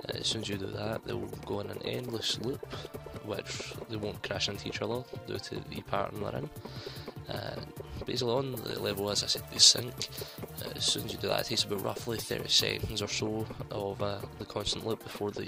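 From 8.52 s to 12.99 s the treble jumps up: pre-emphasis has been left on. The audio was given a high-frequency boost following the 50 µs FM curve, and the complementary de-emphasis cut that should undo it was never applied. The result is about 11 dB too much level at 10 kHz relative to 1 kHz, so this stretch sounds thin, bright and sibilant. The tonal balance returns to normal after 12.99 s.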